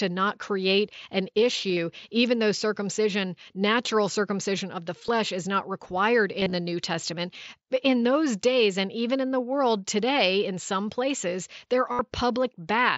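Concealed Bluetooth headset packet loss shows up at 1.69–1.77, 5.07, 6.40–6.52 and 11.92–11.99 s. Dropped packets get patched by repeating the last bit of waveform, so you hear short buzzy, slightly warbly blips.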